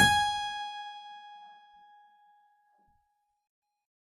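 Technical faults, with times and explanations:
Throughout, HE-AAC compression: the music's treble sounds gritty and metallic, likely because the encoder rebuilds the highs by copying lower bands upward, plainly audible at what fits about 24 kbps. A spectrogram shows smeared, repeated upper bands ending sharply at 14.9 kHz.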